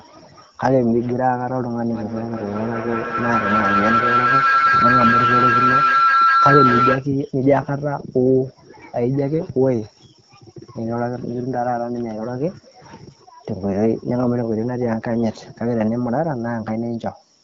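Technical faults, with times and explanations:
1.9 to 7.1 s, feedback howl: two devices in the same room joined the call, so sound from one loudspeaker reached the other microphone and returned with more gain each trip. Instead of dying away, the repeats narrowed onto the frequency the loop favoured, around 1.5 kHz, and swelled into a howl. It rose to about 4 dB above the speech, with the loop's delay of roughly a fifth of a second, until the loop was broken.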